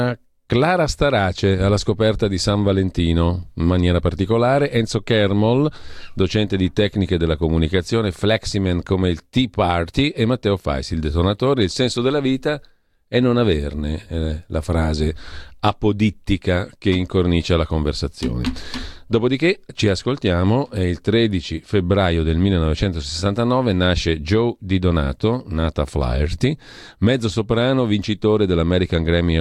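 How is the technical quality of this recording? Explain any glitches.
No glitches turn up anywhere in this speech recording. Nothing in it needs explaining.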